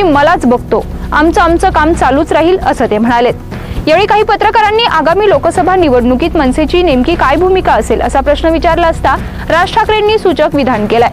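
Hard clipping runs right through the audio, from start to finish. Something in the chain was driven about 3 dB past what it could pass, so the biggest peaks get sliced flat. Only around one or two percent of the samples actually hit the ceiling, so you hear brief crackle and edge on the loud moments rather than constant fuzz. The flattened tops are what throw that extra high-frequency grit up the spectrum.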